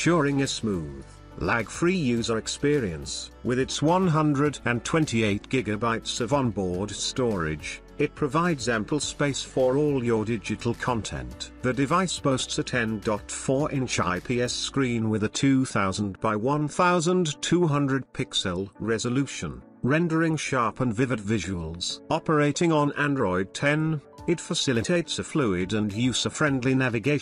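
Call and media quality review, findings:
No faults found.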